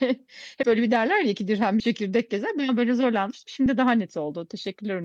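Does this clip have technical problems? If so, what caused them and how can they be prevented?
Yes. Compressed frames were skipped, missing or rejected by the decoder, at 0.62, 1.80 and 3.65 s, so the speech jumps ahead by roughly 70, 20 and 5 ms. Prevent this by checking file integrity and transferring over error-protected links.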